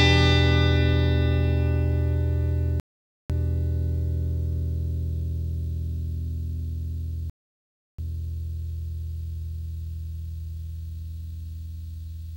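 At 2.80 s the sound cuts to silence, then picks up again at 3.30 s. This is a rebuffering stall. The player ran out of downloaded audio and waited for more to arrive. It happens again from 7.30 s to 7.99 s. Each time, playback resumes exactly where it stopped, so nothing is missing. The gaps simply add time, about 0.50 s and then 0.69 s.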